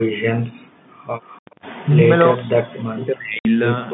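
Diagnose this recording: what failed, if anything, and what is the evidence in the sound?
Background gated by the echo canceller, 0.4 to 1.06 s and again at 1.52 s. This is a call-processing fault. While the far side's audio was playing on the loudspeaker, the canceller's suppressor clamped the microphone path. The room sound falls away by up to about 40 dB across roughly 0.7 s, then springs back. A second, shallower dip of about 6 dB lasts around 40 ms. The gate releases when the loudspeaker signal stops.

Echo leak, 1.31 to 1.4 s, is also a call-processing fault. A faint, delayed copy of speech arrives about 310 ms behind its source, sitting roughly 30 dB under the direct speech. It is heard as a brief ghost rather than a sustained repeat. The likely cause is that the echo canceller on the loudspeaker side did not fully model the acoustic path, so some of what its microphone captured was sent back down the line.

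Speech suppressed in double talk, at 1.86 s and from 2.09 to 3.57 s, is a call-processing fault. At 1.86 s the speech dips by roughly 10 dB for about 70 ms. In the longer stretch it is pushed down by as much as about 40 dB over some 1.5 s. This likely happened because both parties spoke at once. The canceller could not tell near-end speech from loudspeaker echo, so it attenuated everything.

Packet loss filled with silence, 3.39 to 3.45 s, is a network fault. A 60 ms hole cuts hard into the speech, and nothing fills the gap. The length fits two consecutive 30 ms packets. The receiver played silence in their place instead of concealing the loss. The hole falls inside the double-talk stretch, and the band stays limited to telephone width throughout.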